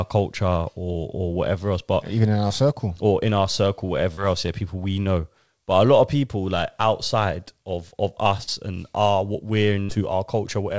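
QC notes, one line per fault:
2.48–2.52 s, 4.14–4.19 s, 8.43–8.49 s: short concealed packet loss. About 20, 40 and 40 ms of speech failed to arrive, and the receiver bridged each gap by extending the preceding sound before blending back. Each is a quick smear or wobble, too brief to fade.
9.83–9.91 s: burst of packet loss. About 60 ms went missing in one run. The held-over sound decays into a dying buzz or hiss, then speech jumps ahead past the lost stretch, a real gap rather than the brief smears, over G.722's 8 kHz bandwidth.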